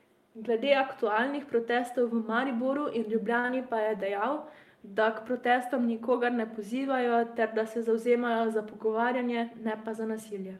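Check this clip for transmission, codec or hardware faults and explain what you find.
Three transmission faults appear in this speech clip, two back to back near 3.4 s and one near 9 s.

From 3.39 to 3.46 s there is a short stall from a late packet. A packet arrived after it was due and the jitter buffer ran dry, so the receiver held the last sound for 45 ms until the data came, then resumed where it had stopped. The sound is drawn out, with a faint buzz or dip, but nothing is lost. That sets it apart from packet loss. Playback also falls 45 ms further behind.

Directly after, from 3.46 to 3.51 s, comes short concealed packet loss. Here 40 ms of audio never reached the decoder in time, and the receiver bridged it with 28 ms of synthesized continuation before blending back into real audio. It is heard as a brief smear or wobble. Unlike the stall, material is actually gone, and a short consonant may be clipped out.

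From 8.99 to 9.44 s, right after "da se zavzemajo za", there is a jitter buffer speed-up. The buffer held more audio than it aims for, so the receiver trimmed short pitch-period slices again and again, about 50 ms in total, playing at 111% speed. The pitch stays the same, which distinguishes it from a sample-rate error, but the speech sounds briefly hurried.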